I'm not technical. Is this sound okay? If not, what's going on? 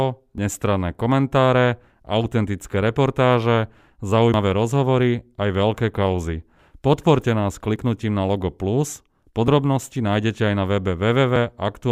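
No. The speech skips forward in five places: 0.38, 4.34, 7.76, 9.48 and 11.36 seconds. At each one you hear a jump in the sound, with no gap of silence. This is most likely a dropped buffer (overrun). The recording program fell behind, and a short piece of audio was lost before it got saved. Most losses are tiny, around a fiftieth of a second. The one at 4.34 is longer, nearer a tenth of a second. Another lands just before "nájdete aj na".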